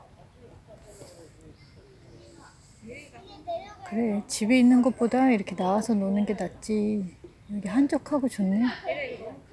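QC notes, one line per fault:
No faults heard.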